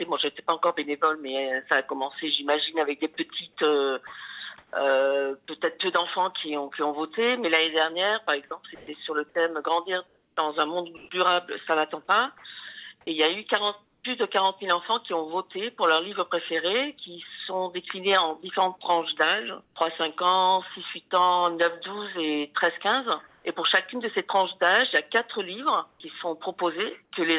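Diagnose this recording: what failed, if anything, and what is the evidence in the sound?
Sound chopped by the voice detector at 4.07–4.73, 8.48–11.09 and 12.38–14.03 s: quiet edges flicker into flat synthetic noise. This is likely call-processing voice detection gating. On a spectrogram, ragged detail alternates with smooth fill.

Comfort noise in place of the background at 19.64–19.76, 23.27–23.45 and 25.91–26.0 s: the background turns featureless and about 1–5 dB quieter, likely from discontinuous transmission. On a spectrogram it appears as smooth, textureless bands, all capped at 4 kHz by the call codec.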